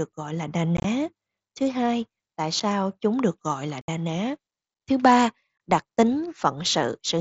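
Speech over a wideband mSBC headset link, with unconcealed Bluetooth headset packet loss. Short voice packets never arrive, and nothing fills the gaps. Abrupt holes fall at 0.77–0.85 s, 2.60 s, 3.81–3.89 s and 5.58–5.60 s. The first is chopped and broken up. The third is a near-continuous dropout of about 70 ms.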